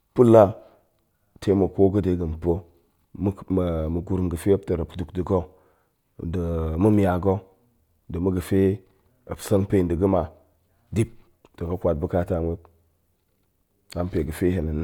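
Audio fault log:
No faults detected in the speech recording; nothing to log.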